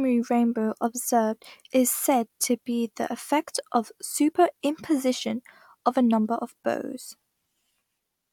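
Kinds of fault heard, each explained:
No faults turn up anywhere in this bit of speech, so there's nothing to list here.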